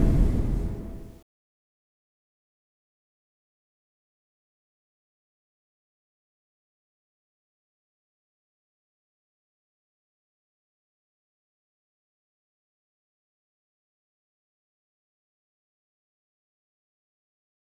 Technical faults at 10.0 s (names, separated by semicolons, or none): none